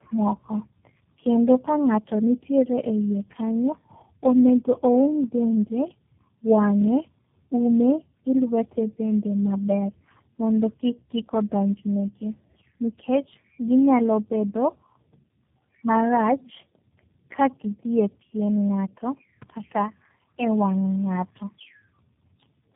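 From start to finish the speech sounds rough, muffled and warbly, with nothing above about 3.7 kHz. This is tandem speech coding. The call passed through several links in turn, each decoding the audio and encoding it again with its own coder, so each stage worked on the previous stage's damage. The sound fits three low-rate speech codecs in a row, G.723.1, AMR-NB and finally G.729A, joined by G.711 links.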